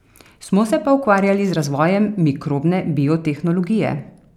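No technical faults can be heard anywhere in this speech recording.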